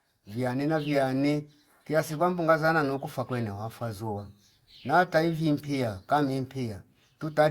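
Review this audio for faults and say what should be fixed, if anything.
No faults turn up in this audio, so nothing needs to be fixed.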